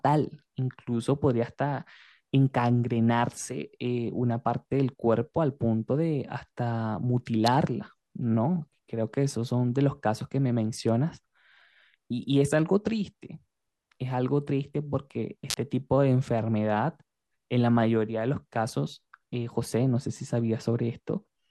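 A nearby switch, motor or static discharge likely arced, and the speech's audio line picked it up as an electrical switching spike: a sharp snap or tight cluster of clicks laid over the speech at 7.46 s, then again briefly from 15.50 to 15.54 s.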